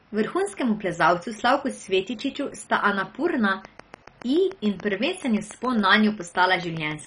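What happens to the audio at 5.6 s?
At 5.6 s the speech sits inside a train of clicks running from 3.65 s to 6.92 s: about twenty near-identical pulses at a steady 7.05 per second, some peaking a few dB above the speech. The likely cause is interference or a faltering interface injecting repeated spikes. They are heard as an even ticking over the voice, pauses included. A waveform shows evenly spaced thin spikes, and a spectrogram shows matching full-height vertical lines.

Under the ticking, the sound is dull and gurgly, with a grainy roughness. This is heavy MP2 compression, likely at a very low bitrate around 32 kbps, where there are too few bits to cover every sub-band. Upper bands are switched off and the remaining ones are coarsely quantised. A spectrogram shows a hard ceiling with nothing above 10.4 kHz, and blocky patches in the upper region that flicker on and off from frame to frame.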